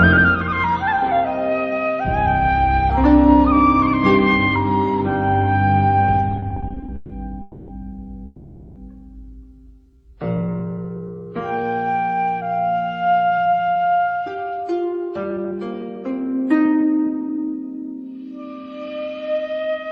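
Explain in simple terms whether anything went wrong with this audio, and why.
Between 6.31 and 7.12 s, the packets carrying the sound kept arriving late, so the receiver's waiting store, the jitter buffer, ran dry over and over. The result is repeated stalls (stutter): eleven tiny hitches, the longest about 140 ms, adding roughly a third of a second. Each gap is filled by stretching the last bit of sound, so nothing is lost, but the audio stumbles and drags through that stretch.

Two longer hold-ups follow, most likely packets stuck in transit long enough to empty the buffer completely. Each one is a call audio freeze: at 7.42 s the sound hangs for about 260 ms, and at 8.26 s for about 500 ms, the held sound fading as the wait goes on. When the packets arrive, the audio picks up exactly where it stopped, so a pause has been inserted rather than anything cut out.

From 9.86 to 11.64 s, the buffer was running low and rebuilding its reserve. 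It repeated tiny slices of the sound again and again, adding about a quarter of a second. This jitter buffer slow-down plays the audio at about 86% speed without lowering the pitch, so the sound feels drawn out and slightly sluggish.

From 13.30 to 17.39 s, the opposite happened: too much audio had piled up, so the receiver trimmed tiny slices to catch up, removing about 0.4 s in all. This jitter buffer speed-up plays the sound at about 111% speed at the same pitch, so that passage sounds hurried and a little rushed.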